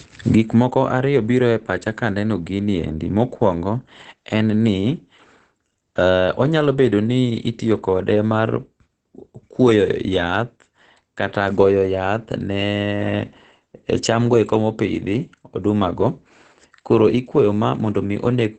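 Throughout the clip the speech sounds muffled and hoarse, with heavy damage and nothing above about 9.3 kHz. This points to likely Opus compression, with the encoder dropped into its SILK speech mode at a low rate, which fits roughly 12 kbps.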